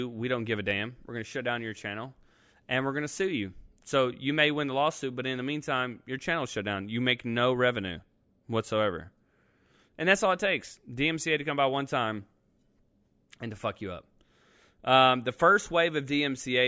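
Nothing here stands out as a technical fault; the speech carries on steadily, with no glitches or dropouts to point to at any moment.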